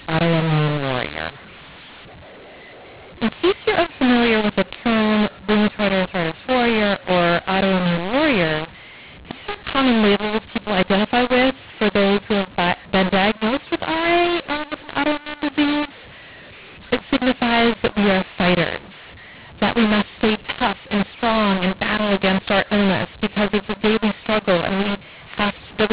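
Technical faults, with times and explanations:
Throughout, mu-law and A-law mixed up: speech coded as A-law is decoded as mu-law, scrambling sample levels so some come out too loud, others too soft, and pauses fill with noise. Unlike clipping, the harsh distortion persists at low levels, not only on peaks.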